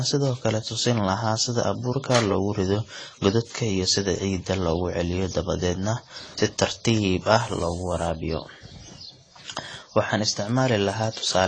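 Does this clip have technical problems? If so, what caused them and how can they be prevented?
Yes. Throughout the clip the speech sounds dull and smeared, with a fizzy, warbling texture on sibilants. This is likely AAC compression at a low bitrate, around 24 kbps. On a spectrogram, the energy stops at a hard, flat ceiling near 9.7 kHz, with nothing above it. Encoding at a higher bitrate, or keeping an uncompressed master, would prevent this.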